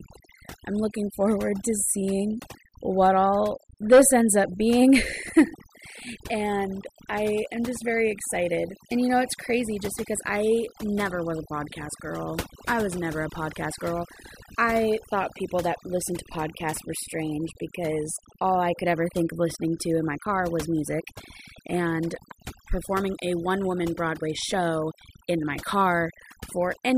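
Speech recording with overdone noise removal applied throughout: a noise reduction stage set far too aggressively cuts individual frequency bands whenever they sit near its noise estimate. The background drops and breaks up into twinkling specks, and quiet voice components vanish.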